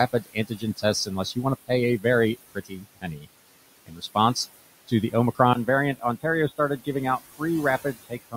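Noise suppressor artifacts run through the whole recording: the suppressor pulls steady noise down by about 17 dB frame by frame, so the room noise, which sits about 16 dB under the speech, sinks between phrases and swells beneath them.

Speech cut by the noise suppressor occurs at 0.13 to 0.84 s, 2.55 to 3.27 s and 3.86 to 4.16 s. The suppressor mistook speech for noise and dropped it by about 20, 20 and 19 dB. A few hundred milliseconds of speech sound swallowed each time.

An input switched to a poorer device likely explains the change at 5.53 s, right after "to the". A 20 ms silence is followed by duller audio, about 5 dB quieter, until the end.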